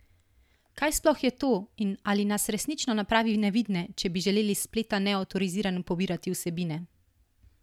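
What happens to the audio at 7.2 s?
Nothing goes wrong at 7.2 s; the speech there plays through intact, with no dropout, click or distortion.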